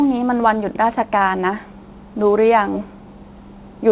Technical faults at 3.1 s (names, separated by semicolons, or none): echo leak